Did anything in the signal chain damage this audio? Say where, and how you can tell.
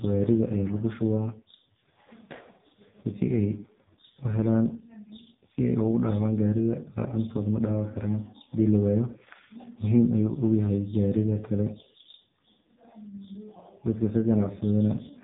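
Yes, at the codec stage, and throughout the speech clip. This is AMR narrowband mobile codec damage. Nothing passes above about 3.8 kHz, and the voice sounds buzzy and synthetic from start to finish, which points to one of AMR-NB's lowest modes, around 5 kbps. The codec keeps only a vocal-tract model excited by a few pulses every 5 ms, so at so few bits the natural texture of the voice is replaced by a coarse, machine-like rendering.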